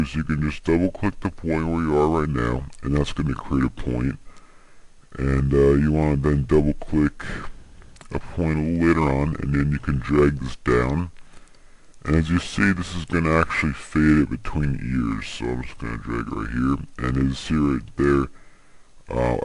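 Throughout the clip, the samples are played back slower than they were captured, with no rate conversion, a wrong sample rate that fits 48 kHz material played at 32 kHz. Everything runs at 0.667 times normal speed and sits 7.02 semitones low, sounding dragged and heavy.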